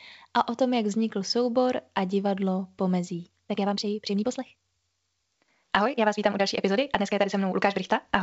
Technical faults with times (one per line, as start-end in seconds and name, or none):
3.23-8.22 time-stretched section